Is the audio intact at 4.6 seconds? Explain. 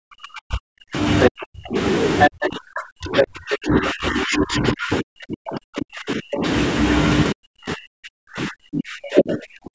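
No. Speech suppressed in double talk runs from 2.29 to 6.43 s: the talker drops sharply, by as much as about 40 dB, fading and breaking up. The likely cause is an echo canceller that couldn't separate talker from loudspeaker echo and turned both down. The other side's voice also leaks through from 4.31 to 4.7 s, a second voice only slightly below the talker, likely loudspeaker playback that the echo canceller didn't fully remove from the microphone.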